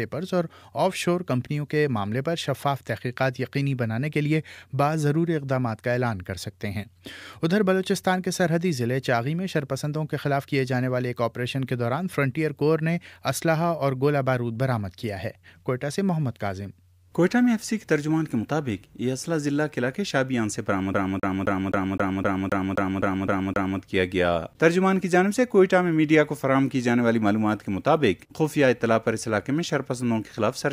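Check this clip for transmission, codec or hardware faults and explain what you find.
One fault is present: the CD is stuck on one turn from 20.94 to 23.80 s. A scratch keeps throwing the laser back a track, so the same 0.26 s of audio repeats 11 times with a brief mute at each jump. It sounds like a fast, even stutter. On a waveform and spectrogram it appears as identical blocks tiled at a regular spacing, separated by thin silent gaps.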